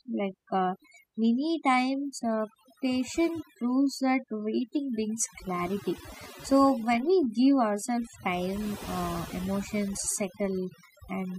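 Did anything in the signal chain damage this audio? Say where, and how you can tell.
Yes. Overdone noise removal damaged this speech throughout, at the processing stage (noise suppression in call processing or a cleanup pass). The pauses drop to near silence peppered with twinkling specks. A noise reducer set too hard drives any frequency band close to its noise estimate down or off, taking quiet voice detail with it. Unlike low-bitrate codec warble, the damage shows in the gaps between phrases, where the background is pulled down and broken up.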